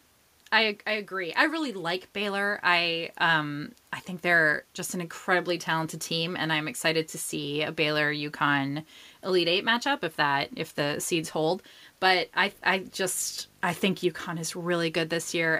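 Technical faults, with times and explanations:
12.48 s to the end: video or display buzz, a 50 Hz field-rate buzz with hash and a thin 15.6 kHz line whine about 30 dB under the speech, from a screen or video cable leaking into the audio.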